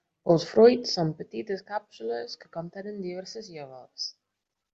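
Nothing in this recording stands out as a technical fault, so there's really nothing to flag here.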